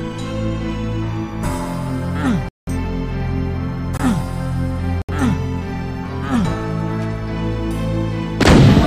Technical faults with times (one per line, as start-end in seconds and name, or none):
2.49-2.69 corrupt frame muted
3.97-4.01 corrupt frame muted
5.02-5.10 corrupt frame muted